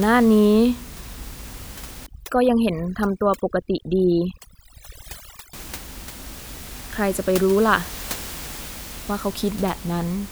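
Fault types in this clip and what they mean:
Overdone noise removal: from 2.06 to 5.53 s the background drops and breaks into twinkling specks, as single frequency bands vanish, unlike a gate muting everything.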